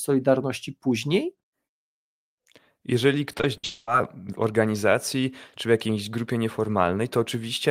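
A speech clip with repeated packet loss (robotic sound) from 3.31 to 3.65 s: four gaps, the longest 60 ms, are patched by repeating the preceding sound, covering about a third of that stretch. It sounds choppy, and a spectrogram shows smeared, repeated harmonic slices with abrupt vertical edges. From 3.65 to 3.89 s, roughly 220 ms of audio is replaced by a continuing buzz or hiss that fades without reaching silence, likely a long network dropout. The waveform shows a decaying, overly regular envelope, and the spectrogram shows flat, frozen bands before the speech resumes.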